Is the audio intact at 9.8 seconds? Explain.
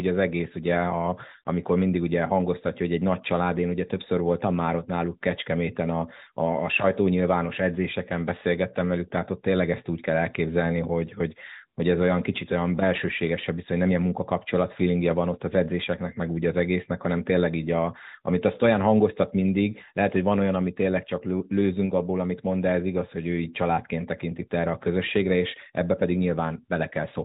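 Yes, the audio is intact at 9.8 seconds, with only the band-limited character of the AMR narrowband mobile codec, which passes nothing above 4 kHz.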